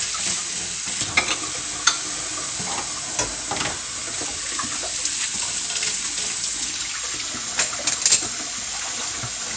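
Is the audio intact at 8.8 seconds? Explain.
Yes, the audio is intact at 8.8 seconds, with no dropout, click, distortion or other fault to be heard there.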